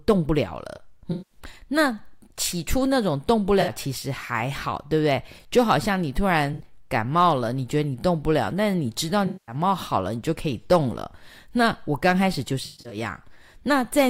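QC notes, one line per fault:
1.11–1.40 s, 3.61–3.71 s, 6.53–6.64 s, 9.26–9.55 s, 12.65–12.97 s: AAC frame loss with concealment. Each gap leaves a smeared, noisy or phasey patch in the speech. The longer dropouts at 1.11 s and 9.26 s last about 190 and 210 ms. At 12.65 s the losses are scattered across 256 ms, the longest run about 150 ms. Lost frames were rebuilt from the last good spectrum, so detail smears into noise.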